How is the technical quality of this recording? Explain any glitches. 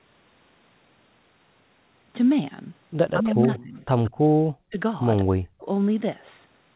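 The recording has several echo-control glitches between about 3.1 and 5.7 s. It fades in smoothly around 1.5 s, and the audio stops near 4 kHz, which fits a G.711 telephone codec.

Speech suppressed in double talk: From 3.13 to 3.81 s the speech dips by about 20 dB in patches. At 4.67–4.77 s and 5.25–5.68 s it almost drops out, by about 40 dB. The likely cause is an echo canceller muting the talker while the far side also spoke.

Echo leak: At 3.41–3.63 s and 4.04–4.17 s a faint delayed copy of the speech follows 176 ms behind, about 20 and 25 dB below the speech. It is likely loudspeaker sound that the far end's echo canceller failed to remove and sent back.

Background gated by the echo canceller: Between 4.14 and 4.39 s the room sound briefly dips by up to about 10 dB for around 150 ms, then returns. The echo canceller pulled the microphone down hard while the loudspeaker played and then released it.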